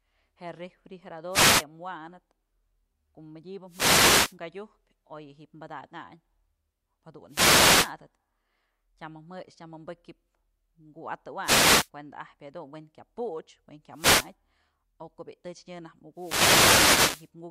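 Speech, interrupted six times by wireless microphone noise hits: 1.30–1.65 s, 3.67–4.37 s, 7.28–7.94 s, 11.41–11.90 s, 13.92–14.33 s just after "puch we'en", and 16.14–17.31 s. Each is a brief swish of static that rises and fades, as the analogue FM radio link dips into multipath fades and receiver noise surges. Unlike a digital dropout, the sound fills with hiss rather than being cut to silence.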